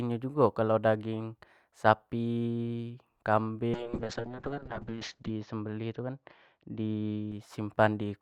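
From 3.74 s to 7.37 s the speech turns rough and watery, and its top end goes dull as the bandwidth narrows from 20 kHz to 8 kHz. It is at its worst for about 1.6 s before clarity returns. This is a call bitrate drop: the bandwidth estimate fell and the encoder was pushed to far fewer bits, which fits a drop from around 64 kbps to about 6 kbps. The speech was coded coarsely and its high frequencies were cut.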